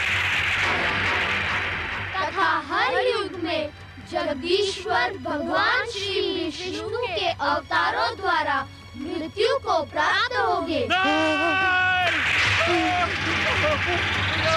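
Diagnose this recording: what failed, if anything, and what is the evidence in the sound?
Nothing stood out on listening to this recording.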